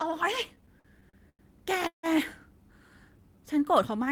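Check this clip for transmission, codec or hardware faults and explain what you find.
Three network-related faults affect the speech: a run of stalls, a brief freeze, and a slow-down near the end.

Repeated stalls (stutter) run from 0.55 to 1.42 s. Packets arrived late again and again, so the jitter buffer emptied seven times and the receiver stretched the last sound over about 235 ms in total, the longest gap 96 ms. The speech drags and stutters. On a spectrogram, short smeared, repeated frames interrupt the harmonics, and the waveform shows fading loops.

A call audio freeze occurs between 1.87 and 2.06 s. The speech halts and a fading buzz or hiss continues the last sound, then drops to about 120 ms of silence before resuming where it stopped. The likely cause is packets held up in transit, draining the buffer and adding about 160 ms of delay. The spectrogram shows a decaying smear, then a blank column.

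A jitter buffer slow-down spans 3.18 to 4.10 s. To rebuild its reserve, the receiver repeated single pitch periods, adding about 87 ms and running the speech at 91% speed at unchanged pitch. The speech sounds drawn out. The waveform shows near-identical repeated cycles, and the spectrogram shows stretched formants without a pitch shift.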